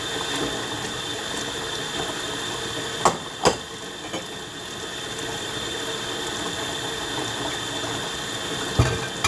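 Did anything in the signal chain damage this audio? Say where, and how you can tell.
No, nothing in the signal chain damaged this audio, and there is nowhere in it where damage can be heard.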